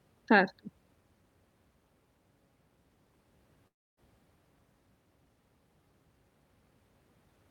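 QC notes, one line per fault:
3.67–4.00 s, long network dropout: the sound smears into a fading buzz that sinks to near-silence, then speech resumes with about 0.3 s gone rather than delayed, likely from a network outage. Unlike a brief packet loss, the concealment runs out and decays to silence.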